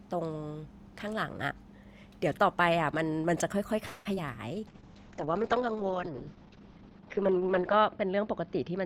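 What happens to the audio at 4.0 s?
At that moment the speech stalls: from 3.85 to 4.07 s the last sound is drawn out into a fading buzz for about 200 ms, never dropping to full silence, and then the speech picks up exactly where it stopped, so nothing is lost but everything after arrives about 200 ms later. This is a call audio freeze, likely caused by packets held up in transit until the jitter buffer ran dry and the receiver filled the wait.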